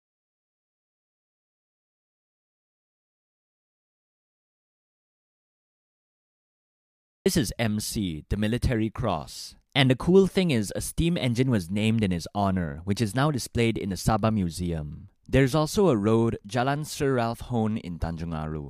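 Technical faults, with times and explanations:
0.0 to 7.26 s, audio dropout to silence: the speech is already gone when the clip opens, with dead digital silence and no room tone until the sound cuts back in. The input was likely lost, so the recorder kept writing silence.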